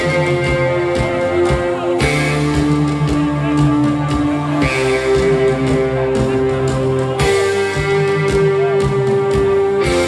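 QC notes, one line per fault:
No faults found anywhere in the clip.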